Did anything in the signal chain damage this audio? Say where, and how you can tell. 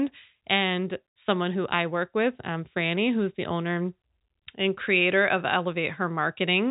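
No, nothing in the chain has damaged this speech; it has come over a G.711 telephone link, which accounts for the band stopping at about 3.8 kHz, and that is the normal character of the format rather than a fault.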